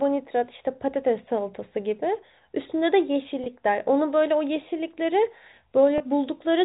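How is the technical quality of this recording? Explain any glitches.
Two brief dropouts mar this telephone-band speech, which sits under a 4 kHz ceiling from its G.711 coding. Packet loss with pitch repetition occurs at 3.44–3.46 s and 5.98–6.00 s. Each gap of about 20 ms, consistent with one lost packet, was filled by repeating the last pitch period, giving a slightly held, buzzy blip. On a waveform it shows as identical repeated cycles. A spectrogram shows smeared, frozen harmonics.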